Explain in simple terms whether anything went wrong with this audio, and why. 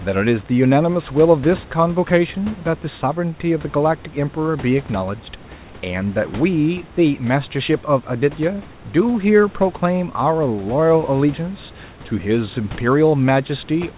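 Nothing stood out on listening: the slightly muffled, telephone-like sound is simply what a normal phone-style call line does by leaving out everything above 4 kHz, and the faint background noise is just the room the microphone was in.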